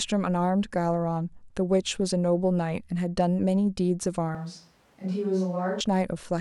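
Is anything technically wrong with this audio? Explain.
Yes. From 4.35 to 5.81 s the speech abruptly turns hollow, roomy and thinner in the bass, drops by about 5 dB, and rides on room noise roughly 35 dB below it. This is likely a switch to a distant microphone, with the close microphone's signal lost for that span.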